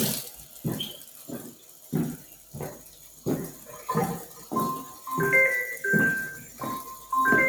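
A speech noise suppressor was left running on this audio. It treats steady sound as noise, so levels pump by about 10 dB throughout. The sound was cut by the noise suppressor at 0.31–0.64, 0.98–1.29, 1.52–1.92, 2.19–2.54 and 2.81–3.25 s. Each time, sustained parts sink by about 6 to 7 dB.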